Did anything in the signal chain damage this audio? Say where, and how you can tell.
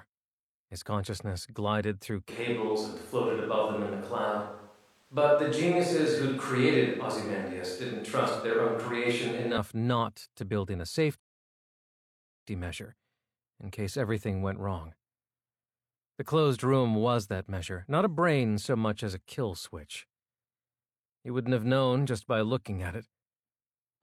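Yes. At the capture stage, from 2.3 to 9.6 s, after "consciousness glided through", the sound turns suddenly hollow and roomy, with thinner bass. Room noise sits about 35 dB below, at the same level. This is likely a switch to a distant microphone. Unlike added reverb, it starts and ends abruptly, before "not to build in".

At playback, after "to build in a", there is a rebuffering stall from 11.2 to 12.47 s. About 1.27 s of silence is inserted, then the audio resumes exactly where it stopped. Unlike a dropout, no audio is missing.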